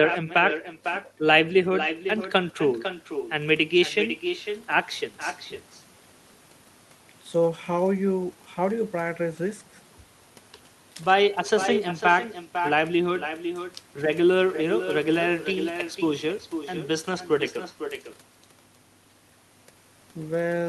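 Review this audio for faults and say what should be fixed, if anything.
Every phrase in this speech clip is trailed, about half a second later, by a fainter, thinner copy of itself, roughly 8 dB below the direct sound, and this doubling runs from start to finish. It is echo with no canceller: the far end is playing the call through a loudspeaker, its microphone picks that playback up, and with nothing subtracting it, the signal returns after the full network round trip. To prevent it, enable acoustic echo cancellation at the far end, or have that participant use a headset instead of a speaker.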